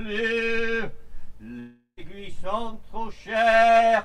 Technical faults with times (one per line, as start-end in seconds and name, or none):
1.59-1.99 long network dropout